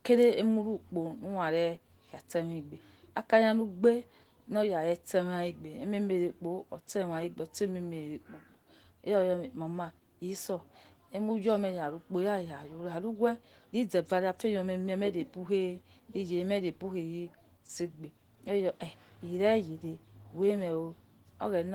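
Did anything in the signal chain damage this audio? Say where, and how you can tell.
Yes, at the codec stage: the whole speech clip carries plainly audible Opus compression damage, grainy and a bit hoarse. Spectrum still runs to about 20.1 kHz, which fits Opus's speech-oriented hybrid mode, likely at a low bitrate around 16 kbps, thinly filling bands.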